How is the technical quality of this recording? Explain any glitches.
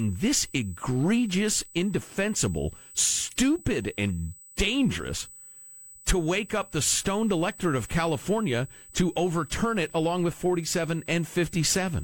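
The recording carries one technical fault: USB whine running through the full length of the speech. It is a steady, fixed-pitch tone at 8 kHz, sitting roughly 25 dB below the speech. The USB bus draws current in bursts on its 125-microsecond microframe schedule, and that periodic load couples into the audio path through shared power or ground. Eight thousand bursts per second produce this high, thin whistle.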